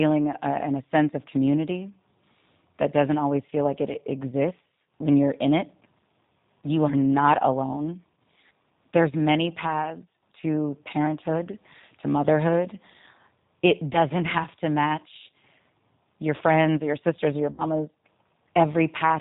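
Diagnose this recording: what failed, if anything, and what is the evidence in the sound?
The damage starts at the codec stage. The speech sounds rough, slightly synthetic and narrowband throughout, the character of the G.729 codec at 8 kbit/s. This codec rebuilds each 10 ms frame from a vocal tract filter, a pitch predictor and a handful of pulses, so fine detail is replaced by a coarse approximation. On a spectrogram, energy stops at a hard ceiling at 4 kHz with nothing above it, and harmonics look smeared and grainy compared with clean speech.

The second fault is at the network stage: VoIP packet loss concealed by the speech codec, at 13.93–13.98 s and 17.51–17.64 s. The decoder filled each gap by extending its last pitch and filter with falling gain. The first dropout fits a single lost 10 ms frame, and the second fits about 70 ms. The sound is briefly stretched and fading, and then recovers weakly. 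On a waveform, the amplitude decays smoothly across each gap. A spectrogram shows the preceding sound smeared across the gap.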